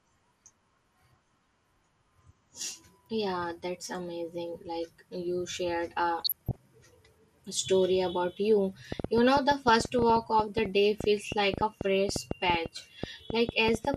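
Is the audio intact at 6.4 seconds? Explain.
No. From 6.22 to 6.56 s, right after "like you shared a", the speech breaks into burbling, with short blips of noise in single frequency bands. This is DAB burbling. Bit errors slipped through the error correction into the MP2 audio data, corrupting samples and scale factors so that single sub-bands misfire for a frame at a time. The damage covers about a third of a second, consistent with a run of corrupted frames at an error rate of a fraction of a percent.

Underneath that, the speech at 6.4 s also sounds dull, with a granular, gurgling edge. The upper sub-bands drop out and the remaining bands are coarsely quantised. This is MP2 compression, likely from MPEG Layer II coding at a low rate. A setting around 80 kbps would starve the 32 sub-bands of bits, so whole high bands switch off and flicker back. The result is the plainly audible, low-rate digital-radio character heard here.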